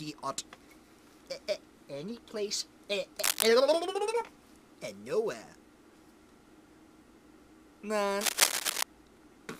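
A worn or loose cable, connector or control being moved likely changes its contact resistance erratically, adding cable scratch noise: dense, uneven crackling bursts from 3.19 to 3.47 s and from 8.21 to 8.83 s, roughly as loud as the sound itself.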